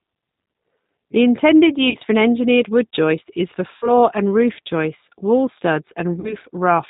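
Throughout, the speech passes through a low-bitrate CELP codec, most consistent with 8 kbit/s G.729. The codec rebuilds each frame from a vocal tract filter, a pitch predictor and a few pulses, and discards everything above 4 kHz. The result is band-limited, slightly rough, synthetic-sounding speech with plainly audible coding damage.

VoIP packet loss concealed by the speech codec occurs at 1.90 to 1.97 s, 3.77 to 3.92 s and 6.20 to 6.36 s. During each gap, the decoder extrapolates from its last pitch and filter while lowering the gain, which fits losses of roughly 40 to 50 ms. Each gap becomes a short, fading buzzy tone or coloured noise, and the speech stays weak or distorted briefly after it resumes.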